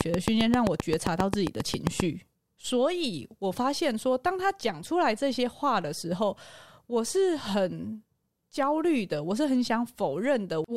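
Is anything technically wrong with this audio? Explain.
Yes. From the very start to 2.01 s there is a train of clicks: a steady ticking, about 7.5 per second, evenly spaced, roughly fifteen sharp pops in all. They sit well on top of the speech, peaking about 20 dB above it, and tick through the gaps too. The cause is likely a repeated pulse leaking into the signal, such as interference from nearby equipment or a faulty connection or power supply.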